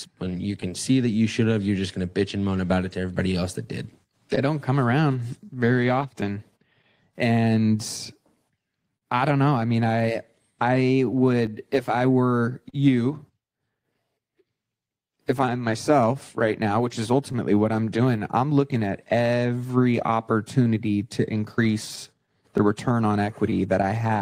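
Speech, with clock drift between sender and receiver running the whole way through. The sending side's clock seems to run slow, roughly 3 percent behind the receiver, so the jitter buffer keeps draining and never settles. You hear that as small timing hiccups scattered unevenly across the clip rather than any single obvious glitch, and it's the root of the timing corrections.

Because of that drift there are repeated timing corrections from about 0.24 s to 23.13 s. The receiver keeps repeating tiny slices to stay in step, which works out to playback at about 98 percent speed, with roughly half a second of padding added in total. Each repair is small, so it comes across as a slightly loose, uneven tempo and the odd stutter, all stretching in the same direction.

There are also scattered short gaps in three stretches. About ten small holes fall between 4.04 s and 9.04 s, and around seven more between 11.46 s and 18.91 s. 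Another seven or so are packed into 21.65 s to 24.16 s. Each one is patched by carrying the last sound forward. The longest is around 40 ms, and in the final stretch around 20 ms. These register as brief ticks and smears rather than dropouts, and they fit isolated late or lost packets.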